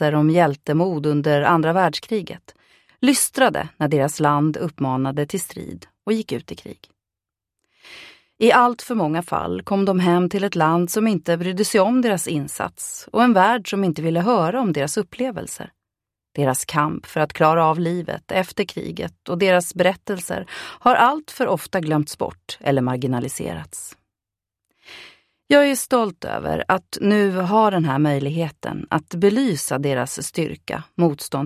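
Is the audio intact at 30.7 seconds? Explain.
Yes, the audio is intact at 30.7 seconds, with nothing there breaking up or interrupting the signal.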